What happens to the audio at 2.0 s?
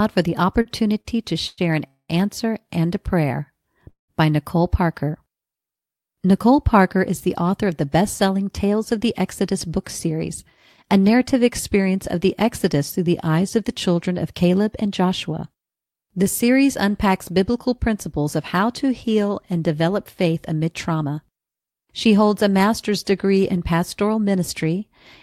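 A call audio freeze runs from 1.87 to 2.11 s: the last sound continues as a fading buzz or hiss ending in silence, likely from late packets emptying the jitter buffer, then resumes unbroken.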